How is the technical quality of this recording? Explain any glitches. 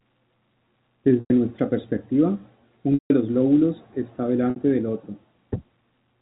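The speech, carried over a G.711 telephone line, has three short dropouts from packet loss with pitch repetition. They occur at 1.2 to 1.3 s, 2.94 to 3.1 s, and 4.5 to 4.56 s. Each gap is filled by replaying the last pitch period as it fades. The 60 ms gap sounds like a held, buzzy tone. The 100 and 160 ms gaps fade to silence before the speech cross-fades back.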